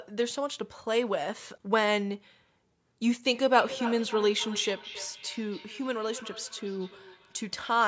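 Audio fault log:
3.28–7.88 s feedback echo between two devices: speech recurs roughly every 0.3 s at up to about 14 dB below, looping through another device; spectrogram shows delayed duplicate syllable patterns.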